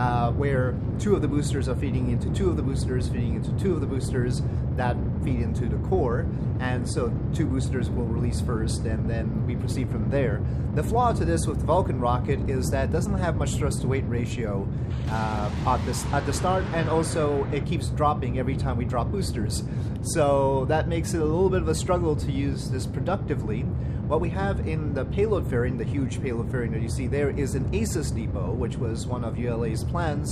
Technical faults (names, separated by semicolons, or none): none